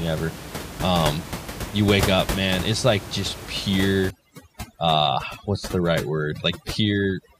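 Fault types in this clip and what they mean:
Overdone noise removal: from 4.10 s, an over-aggressive noise reducer cuts bands near the room-noise level, leaving speech over twinkling near-silence.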